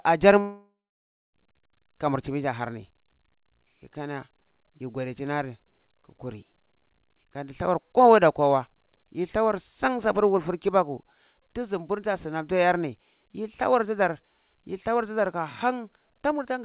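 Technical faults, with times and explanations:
0.40–1.35 s, long network dropout: the sound turns into a fading buzz, then about 0.6 s of silence, and resumes with that stretch missing, likely because packets stopped arriving. On a spectrogram, a smeared band fades into an empty gap, and the waveform flattens.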